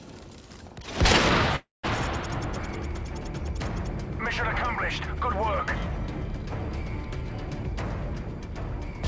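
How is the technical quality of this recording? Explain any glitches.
One glitch stands out: a call audio freeze from 1.56 to 1.85 s, with the band topping out at 8 kHz as a G.722 call path would. Packets were likely held up, draining the jitter buffer. The receiver stretched the last sound into a fading buzz or hiss, then about 170 ms of silence, and resumed where it stopped. Nothing is lost, but everything after runs 275 ms late.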